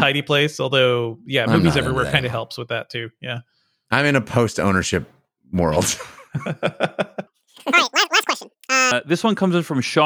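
In this speech clip, from 7.27 s to 8.91 s the sound suddenly turns chipmunk-like, rushed and squeaky, then drops back to normal pace and pitch at the end of that span. This is a section at the wrong speed: that stretch runs at twice its recorded rate, so timing compresses and pitch rises by roughly ten semitones together. The likely cause is that segment being played or resampled against a mismatched clock during editing or playback.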